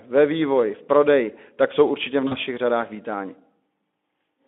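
A speech clip with VoIP packet loss concealed by the speech codec from 2.27 to 2.37 s. About 40 ms of audio went missing, consistent with two lost 20 ms frames, and the Speex decoder filled the gap by extrapolating its last pitch and filter at falling gain. This leaves a brief, fading smear that lingers past the gap on the narrowband 200 Hz to 3.5 kHz line.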